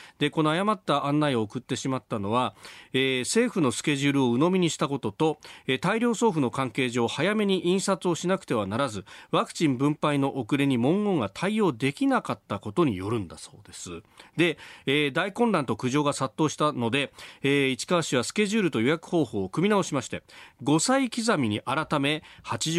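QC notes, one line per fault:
No faults found on listening.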